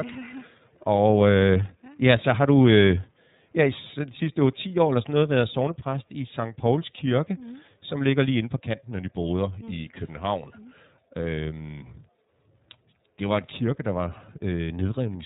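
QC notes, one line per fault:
throughout iLBC codec: speech lacks everything above 4 kHz and sounds steadily rough and synthetic, consistent with 30 ms frames near 13.33 kbps, with no dropouts.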